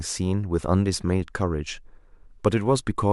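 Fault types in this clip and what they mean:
No fault types can be heard in this clip.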